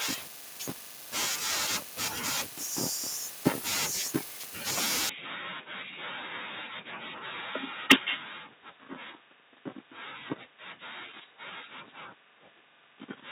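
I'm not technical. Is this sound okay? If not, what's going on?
No. From 5.09 s to the end, the speech turns duller, quieter and boxier with no gap, likely an input switched to a poorer device. It's a lasting change, not a brief blip.

Between 7.90 and 7.94 s, a loud syllable gets a harsh, crackly edge, likely microphone overload, where the loudest peaks are chopped off instead of the whole sound changing.

At 7.92 s, right on that crackle, everything steps a little quieter at once, likely the microphone volume stepped down. Unlike the dull switch, the tone stays the same and only the loudness drops.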